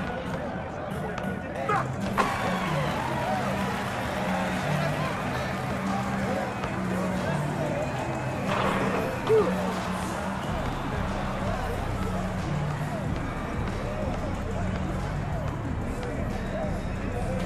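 From the start to 3.38 s the sound runs at twice its natural pace yet keeps its normal pitch, so it comes across as rushed, before the pace drops back abruptly. This is a time-stretched section: software likely squeezed this stretch to fit a shorter length, preserving pitch by discarding short slices of the waveform, roughly half of them at this 2.0× rate, and butting the remainder together.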